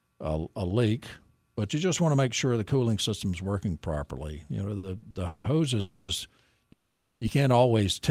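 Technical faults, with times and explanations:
4.77–5.46 s, repeated stalls (stutter): four short holds (longest 170 ms, 330 ms total) stretch the sound, so it drags and catches in small steps. Nothing is lost, unlike a dropout.
5.80–6.10 s and 6.72–7.23 s, call audio freeze: one unbroken held buzz or hiss of 280 ms, then 490 ms before "can't always". The speech then resumes where it stopped. The likely cause is delayed packets emptying the jitter buffer.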